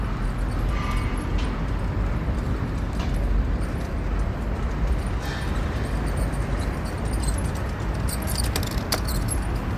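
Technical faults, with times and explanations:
No technical faults are audible anywhere in this sound.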